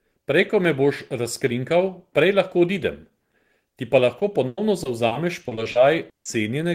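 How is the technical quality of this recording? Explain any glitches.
Near the end, from 4.19 to 6.27 s, the speech turns choppy and robotic, with pieces missing. This is repeated packet loss: eleven gaps, the longest 160 ms, totalling 480 ms, or about a quarter of that stretch. Each gap was patched by extending the preceding sound before the next dropout hit.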